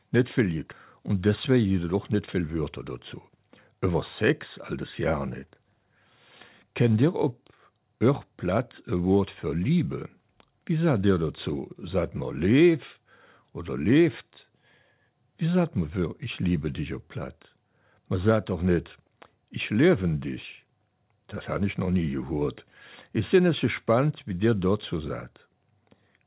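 Jitter buffer speed-up, from 0.99 to 2.63 s and again from 3.14 to 3.95 s: the receiver trimmed excess buffered audio by cutting short pitch-period slices, removing roughly 150 ms and then 100 ms. The sound runs about 10% fast at unchanged pitch and feels briefly hurried.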